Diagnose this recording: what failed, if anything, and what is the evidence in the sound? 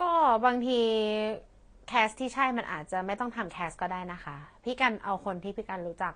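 Codec stage: the speech has nothing above 9.8 kHz throughout, with layered artefacts that likely come from transcoding between lossy codecs, a low-bitrate AAC encode re-encoded as Vorbis.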